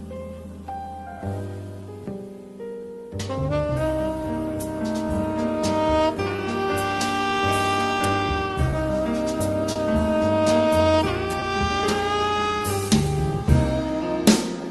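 What you've got here is audio that came over a call path, Opus by the sound of it, topping out around 12 kHz, with its timing wandering the whole way through. The root problem is clock drift between sender and receiver: the sender's clock runs about 2 percent slow, so the jitter buffer keeps draining and the receiver has to pad things out to keep playing. You hear that first as repeated timing corrections from 0.18 to 5.61 s, where playback runs at about 98 percent speed and stretches the stretch by around a tenth of a second. It comes back from 12.34 to 14.62 s at the same 98 percent, adding around 50 ms. None of the edits jump out on their own, but there are little hiccups at uneven spacing. In between, the buffer actually runs dry four times, giving a short stall from a late packet at 6.36–6.40 s, 8.71–8.75 s, 9.73–9.78 s and 11.40–11.44 s. Each time the receiver holds the last bit of sound for 20 ms (30 ms at the 9.73 s one) until the packet turns up, then carries on from exactly where it left off. 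Nothing goes missing, but you get a brief smeared hold with a faint buzz or dip.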